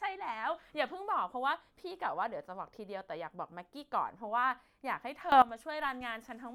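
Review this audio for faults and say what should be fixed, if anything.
At 5.32 s the speech and its background noise jump up together by about 16 dB, a sudden gain jump lasting until 5.42 s. The likely cause is a gain change applied in a single sample with no ramp. Ramp gain changes over a few milliseconds.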